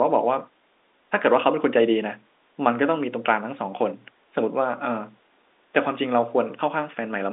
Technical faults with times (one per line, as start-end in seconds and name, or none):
none